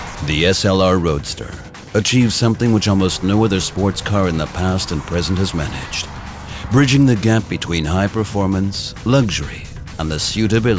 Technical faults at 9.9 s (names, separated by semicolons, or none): none